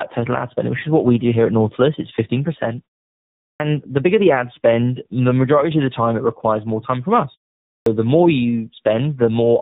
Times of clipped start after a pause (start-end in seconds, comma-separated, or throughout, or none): 3.50-3.60, 7.77-7.86